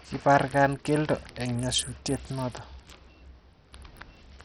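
From start to finish the speech carries heavy damage from likely Bluetooth SBC compression at a small bit pool, which fits a rate near 64 kbps. The upper sub-bands are starved of bits, so treble drops out and flickers, while coarse quantisation leaves gritty, aliased noise on the sound.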